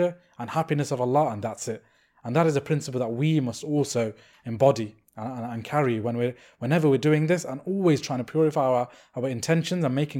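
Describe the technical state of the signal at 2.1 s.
At 2.1 s the speech carries a fine hiss and grainy roughness riding on the signal itself, strongest on loud passages and sibilant, high-frequency energy and absent in the pauses. This is sample clock jitter, present across the whole clip. The converter's clock wanders by around 2 microseconds, so each sample lands slightly early or late; where the waveform changes steeply, that timing error becomes an amplitude error, here about 40 dB below the signal.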